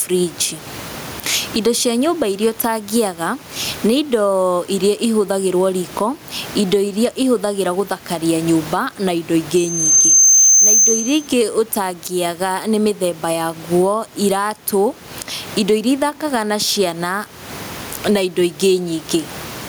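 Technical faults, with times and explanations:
Throughout: gain pumping. Each loud stretch of speech is pulled down, a swing of around 20 dB, so loud and quiet passages sit unnaturally close together and the speech sounds squashed. The likely cause is input gain set far too high with a fast limiter clamping each peak. The room noise sits normally about 32 dB below the speech.
9.56 to 11.28 s: loudspeaker feedback squeal. A single tone at 6.3 kHz swells over about 0.7 s until it stands around 10 dB above the speech. The microphone is hearing the loudspeaker it feeds, and at that one frequency the loop gain passes unity, so the tone keeps reinforcing itself. It stays locked to one pitch and grows independently of the speech, unlike a whistle or interference tone.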